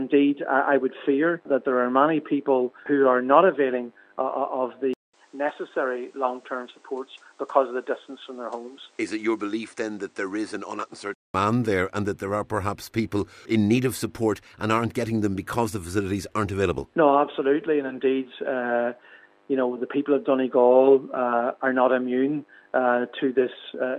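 An input switched to a poorer device from 4.94 to 11.34 s: a 200 ms silence opens the change, after which the sound drops to about 5 dB quieter, loses everything above 9.8 kHz, and takes on a duller, boxier tone over a new noise floor sitting some 35 dB under the signal. This likely comes from the recording input jumping to a lesser microphone or headset call profile, then switching back at 11.34 s.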